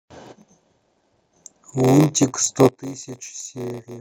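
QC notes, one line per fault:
Throughout: block size mismatch (padded). A steady buzz at 93.8 Hz rides under the speech, and everything plays slower at 0.938 times normal speed while the timbre stays about where it should be. Each block handed on is shorter than the block the next stage reads, so the shortfall is filled with silence, punching a tiny gap at the block rate. The buzz frequency points to a 512-sample read block, with the gaps stretching the timeline.
2.69 s to end: sudden gain jump. The level drops by about 16 dB in a single step and stays down until the clip ends, with the speech and the background noise falling together rather than the talker simply getting quieter. That joint drop points to a digital gain change applied between one sample and the next with no ramp, likely a setting change or a bit shift taking effect mid-stream.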